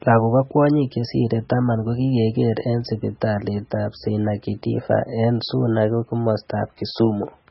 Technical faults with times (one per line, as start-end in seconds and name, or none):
0.00-7.50 MP3 compression